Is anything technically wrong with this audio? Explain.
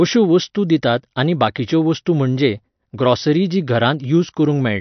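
Yes. Throughout the speech the sound is dull and watery, with nothing above about 6.1 kHz, and the damage is plainly audible. This is likely MP3 compression at a low bitrate, around 48 kbps by the sound, where the encoder cuts the treble and drops weak frequency lines that flicker between frames.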